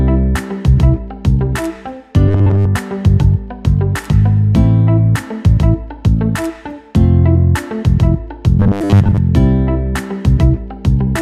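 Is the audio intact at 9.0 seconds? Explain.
No. From 8.60 to 9.18 s there is robotic sound from repeated short buffers, likely from audio arriving too seldom so that a 10 ms slice is looped. Most of the stretch is repeats, forcing a rigid metallic 100 Hz buzz. The waveform shows identical cycles, and the spectrogram shows evenly spaced harmonic stripes.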